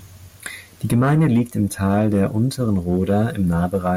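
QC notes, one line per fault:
No faults found in this clip.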